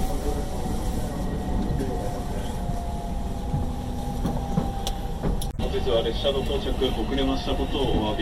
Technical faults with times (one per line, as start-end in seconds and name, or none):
1.67-1.69 damaged data in a compressed stream
5.49-5.61 damaged data in a compressed stream